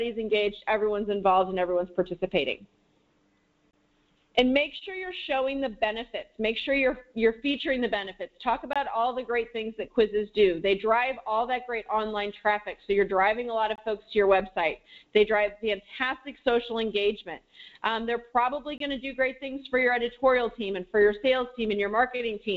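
At 3.71, 8.73, 13.76 and 18.78 s the audio drops out for about 23 ms each time: a gap between chunks. The sound arrived in 5 s pieces with silence left at each join, so it breaks into short regular holes without losing content. Through the call path, nothing reaches above 8 kHz, which fits G.722.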